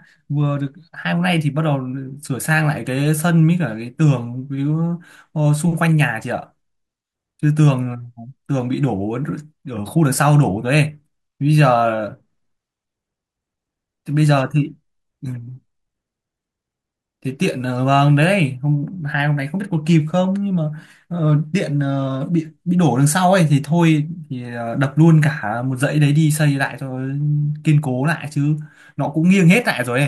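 No technical faults can be heard anywhere in this speech recording. There is nothing in the audio to flag at any point in time.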